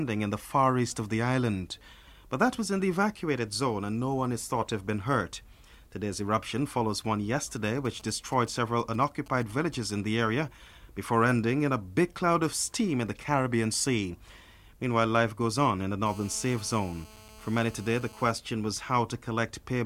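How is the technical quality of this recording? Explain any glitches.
Two bursts of mobile-phone interference mar the recording. Nothing else is assessed here.

From 7.85 to 9.75 s there are GSM signalling bursts: a nearby 2G handset exchanging control traffic emits short clusters of radio pulses, which the audio circuitry rectifies. The result is a galloping run of brief 217 Hz buzzes, roughly 25 dB below the programme.

From 16.06 to 18.31 s a GSM phone buzz appears. The handset, now in a call, transmits continuously in bursts at 217 Hz, and rectification turns them into a steady, harsh, harmonic-rich rasp, about 23 dB below the sound and unrelated to it.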